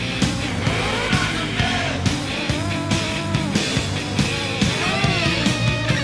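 From about 0.48 s to 2.12 s there's a wrong sample rate problem. The sound drops in pitch by roughly one and a half semitones and slows to about 0.92 times normal speed, both shifting together, which is the giveaway that samples are being played out slower than they were captured, with nothing resampling them. That ratio fits material recorded at 24 kHz being clocked out at 22 kHz, so it comes across as slightly heavy and sluggish.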